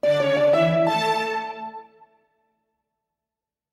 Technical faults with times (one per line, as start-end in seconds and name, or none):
0.00-3.73 noise suppressor applied to music or sounds
1.83-2.26 sound cut by the noise suppressor